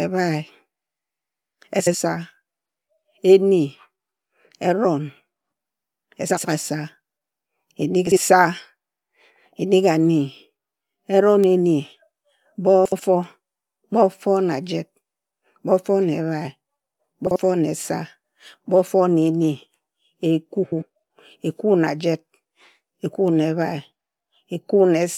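Frames out of order occur at 1.80, 6.30, 8.07, 12.85, 17.26 (just before "na esa") and 20.63 s. Each time, two neighbouring blocks of 46 to 93 ms play swapped. The speech becomes a brief garbled flutter. No time is lost.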